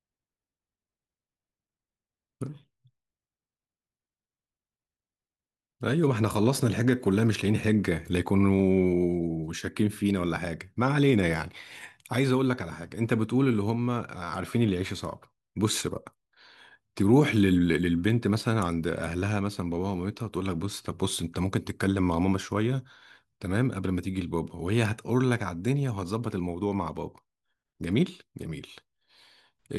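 No faults found anywhere in the speech recording; nothing to flag.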